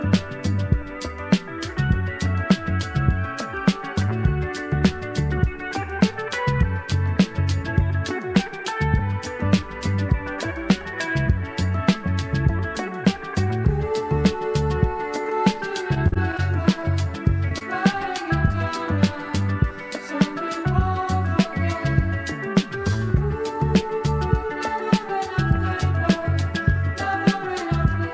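At 15.24 to 15.28 s, short concealed packet loss: about 20 ms of the stream arrived too late for the decoder, and the receiver bridged the hole by extending the preceding sound before easing back into real audio. It comes across as a brief smear or wobble where a short sound can be swallowed.

From 15.94 to 16.40 s comes repeated packet loss, heard as robotic sound. Five separate gaps, the longest 40 ms, fall within half a second. Each is patched by continuing the previous sound, and the next arrives before the audio recovers, so about a fifth of this stretch is synthetic fill. The result is choppy, with fragments missing.

Two more instances of short concealed packet loss follow at 17.48 to 17.53 s and 17.59 to 17.63 s. Each covers about 20 ms. Throughout, the call path cuts off everything above 8 kHz, consistent with a 64 kbps G.722 link.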